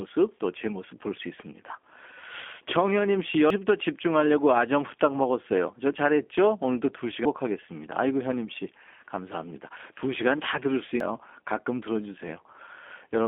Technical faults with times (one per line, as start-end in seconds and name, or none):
0.00-13.27 G.729 codec
3.50 audio missing between chunks
7.25 audio missing between chunks
11.00 audio missing between chunks